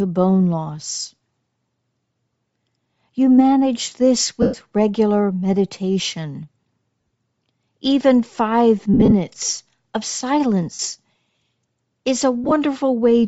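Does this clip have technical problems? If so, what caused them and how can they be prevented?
Yes. The speech has likely passed through Bluetooth LC3 compression at a low bitrate, fitting roughly 32 kbps, so the upper band is noise-filled, giving a breathy, grainy edge throughout. Using a higher LC3 bitrate setting or a wired connection would prevent this.

Lost LE Audio frames occur at 4.42–4.54 s, between "manage this" and "regular meditation"; at 7.02–7.09 s, just after "regular meditation"; and at 8.94–9.13 s, 10.74–10.79 s and 12.44–12.52 s. In each, the decoder patches the gap with recycled spectrum and random signs, turning the speech into a brief noisy smear. The first gap is about 112 ms long, the fourth about 45 ms, and the others are short dropouts scattered over 75 to 180 ms. Keeping the devices close, clearing obstacles and reducing 2.4 GHz interference would prevent these losses.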